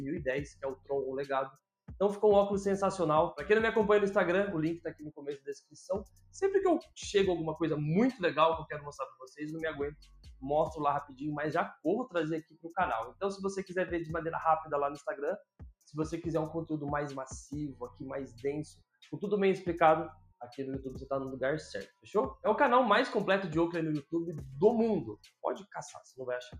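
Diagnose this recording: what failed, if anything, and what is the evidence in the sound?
The call-processing stage is the culprit: a noise suppressor built for speech was left running, and it's a noise suppressor applied to music or sounds it doesn't understand. Across the whole clip the level keeps breathing by something like 5 dB as it mistakes sustained tones and ambience for noise. Onsets get through fine, but anything held or decaying gets pulled down, so the sound pumps and thins rather than sitting steady.

You can hear distinct spots where sound is cut by the noise suppressor, each lasting a few hundred milliseconds at most: 0.54 s, 4.94 s, 6.08 s, 9.12 s, 9.96 s, 11.05 s, 12.42 s and 20.15 s. The worst are at 4.94 s and 12.42 s, dropping about 21 dB, and the 20.15 s one is milder at about 9 dB. In each case the suppressor judged that sound to be noise and clamped it.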